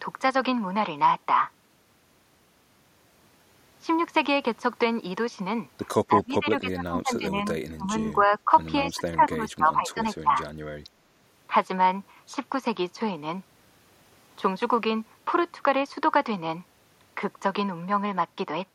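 From 6.06 to 7.45 s the speech sinks by roughly 20 dB, then dips again at 7.69 to 7.93 s (deepest, around 25 dB), 8.12 to 8.51 s (slight), 8.83 to 10.02 s and 10.22 to 10.37 s (both around 15 dB). This is speech suppressed in double talk, likely an echo canceller mistaking the talker for loudspeaker echo while the far side spoke. The waveform shows pinched envelopes; the spectrogram shows faded bands.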